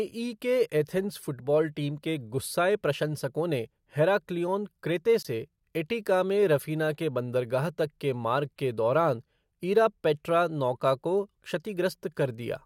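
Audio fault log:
5.23–5.26 s, Bluetooth dropout: the speech drops to a brief hole of silence, about 21.3 ms, then resumes as if it had played on, likely from a wireless frame arriving too late.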